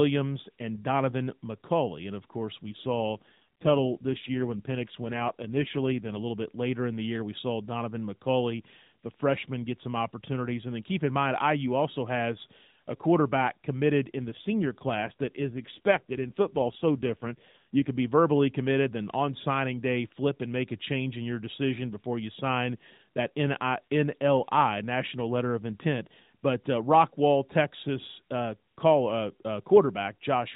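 AMR rate drop, 2.66 to 6.21 s after "of course" and 14.16 to 17.90 s after "has a quarterback committed": the band stays narrow and unbroken, but the speech turns rougher and more synthetic, which fits the codec falling from 12.2 to 5.9 kbps to free bits for error protection on a weak link.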